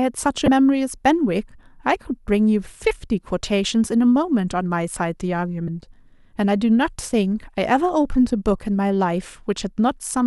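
Damaged data in a compressed stream shows up twice in this speech clip, at 0.45 to 0.48 s and again at 5.65 to 5.68 s, each a brief disturbance of roughly 30 ms. Corrupted bytes in the encoded stream leave the decoder with frames it cannot interpret properly, so it produces a burst of garbled output, loses its place in the bitstream and has to hunt for the next valid frame header before clean playback resumes.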